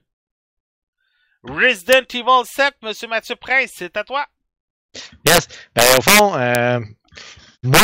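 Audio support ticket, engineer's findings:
Violent cracks on loud speech peaks, far harsher than clipping: brief at 1.93 s and 6.55 s, longer bursts 5.27–5.38 s, 5.79–6.19 s, 7.74–7.84 s. Integer overflow in the gain or mixing stage: peaks up to about 6 dB over full scale wrap to opposite sign instead of limiting.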